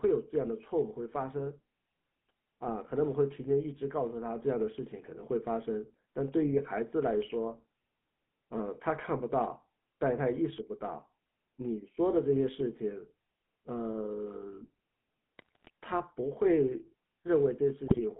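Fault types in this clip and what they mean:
GSM full-rate codec: pulse-driven vocal-tract coding gives the speech a buzzy, gravelly roughness throughout, and the spectrogram shows energy held between 150 Hz and 3.4 kHz, empty above.
GSM bit errors: corrupted decoder values at 15.38–15.7 s and 17.88–18.01 s produce squawks and gargling, visible as sudden level bursts and smeared spectral blocks.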